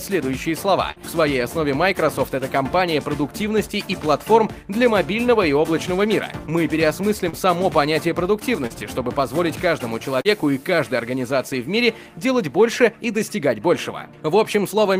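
Short concealed packet loss occurs at 0.91, 7.29, 8.67 and 10.21 s: each time, about 40 ms of audio arrived too late, and the receiver extended the preceding sound to cover it. Each gap becomes a brief smear or wobble, and the one at 8.67 s also stretches the timing by roughly 15 ms.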